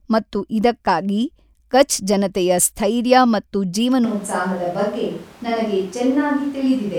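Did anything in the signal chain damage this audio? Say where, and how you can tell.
Yes, at the capture stage: from 4.05 s to the end the speech abruptly turns roomy and hollow, thinner in the bass and about 5 dB quieter, with room noise only about 25 dB below it. This is likely a switch to a distant microphone. A spectrogram shows the low end thinning and a raised noise floor; the waveform steps down in level.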